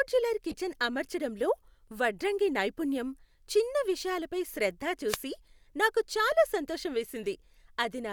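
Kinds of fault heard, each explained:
Corrupt frame decoded: damaged bits in compressed frames were still decoded, so wrong gains and misread codes placed energy in the wrong frequency bands. From 0.50 to 0.54 s, just before "అమర్చడంలో వడ్రంగి నైపుణ్యం చిన్న", a brief chirpy blip peaks at about -25 dBFS, which fits a handful of bad frames. A second one at 5.70 s, before "నాకు చాలా సంతోషం", is far fainter, around -65 dBFS. On a spectrogram each shows as a short, sharp-edged patch of misplaced energy. On the waveform it appears as a small burst.
Wireless microphone noise hit: the FM radio link faded as reflected signals cancelled, letting receiver noise rise over the speech. From 5.07 to 5.17 s, right after "నైపుణ్యం చిన్న విషయాలపై శ్రద్ధ", a swish of static lasting about a tenth of a second washes over the sound. A spectrogram shows a broadband noise smear across most of the display's height for that moment. 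The waveform shows a hissy, fuzzy thickening rather than a single clean spike.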